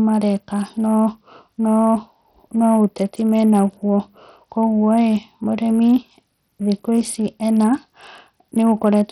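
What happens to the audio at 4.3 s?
At 4.3 s the speech carries heavy codec damage, present from start to end. The likely cause is Bluetooth SBC compression. The encoder splits the sound into wide sub-bands and shares out too few bits. The upper bands are starved, so treble flickers and nothing survives above 14.8 kHz. The remaining bands are coarsely quantised, adding gritty noise and aliasing. The damage points to a low bitrate near 64 kbps.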